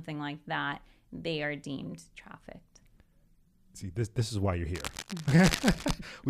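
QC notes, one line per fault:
4.75–5.95 s, cable scratch noise: dense, uneven rustling bursts sit just under the speech level. A worn cable or connector being moved is the likely cause.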